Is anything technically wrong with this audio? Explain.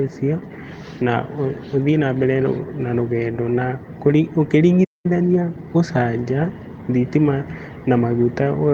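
Yes. The speech cuts out briefly, then hurries to catch up, and two short stretches sound rough.

At 4.84 s the audio goes silent for about 0.2 s, resuming at 5.06 s. This is a playback stall: the player most likely ran dry of buffered data, or its output thread was held up, so nothing reached the output until it recovered. Unlike a dropout from lost data, which leaves a gap of only a few milliseconds or a masked blip, this is a clean, noticeable halt mid-flow.

From 5.06 to 5.86 s the speech plays at 1.25 times normal speed with its pitch unchanged. This is time-compressed catch-up: having fallen behind during the stall, the player trims its backlog by removing small slices of audio and cross-fading the joins. What separates it from a simple speed-up is the pitch: a resampled speed-up would raise the pitch along with the rate, whereas here only the pace changes.

The lost packets rebuilt from error correction fall at 5.29 to 5.35 s, a 40 ms patch that fits two packets, and at 6.39 to 6.49 s, a 60 ms patch that fits three. 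In each case the original packets went missing, and the decoder played the lower-bitrate copies carried in the packets that followed. There is no gap, only a brief roughening and added noise. This is what distinguishes it from packet-loss concealment, which would instead smear or fade the sound.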